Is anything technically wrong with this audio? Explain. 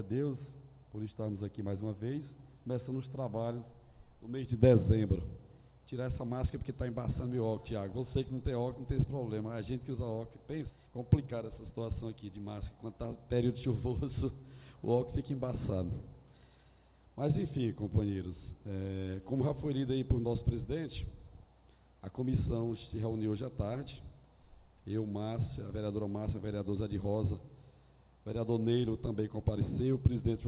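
Yes, there are two related faults, both just past the ten-second mark.

Skip ahead, 10.70 to 10.72 s: about 0.4 s of audio is simply gone. With later audio already queued, the receiver threw away that stretch, either lost in transit or discarded when the jitter buffer overflowed, and played on from the next available piece. Nothing fills the hole, so the material before and after is butted together almost seamlessly. The result is an abrupt jump forward rather than a silence.

Jitter buffer speed-up, 10.80 to 12.94 s: immediately after the jump, the audio runs at about 110% speed while keeping its pitch. The buffer was still holding more audio than its target, so the receiver trimmed it down by repeatedly cutting out tiny slices one or a few pitch periods long, removing roughly a fifth of a second in total. Across those two seconds the sound feels rushed and its timing compressed, before settling back to normal pace.

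Throughout, the band ends at 4 kHz, which points to narrowband G.711 mu-law coding on a call path.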